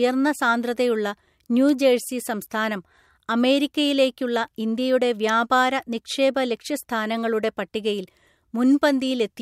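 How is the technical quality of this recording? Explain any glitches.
Two brief glitches break into the speech, at 1.69 s and again at 5.29 s. Each is a sharp, dry snap lasting only a few milliseconds and peaking at a moderate level of roughly -20 dBFS, sitting on top of the voice rather than replacing it. These are most likely electrical switching spikes: a nearby switch, motor or static discharge arcing briefly, with the audio line picking up that burst of energy as a click.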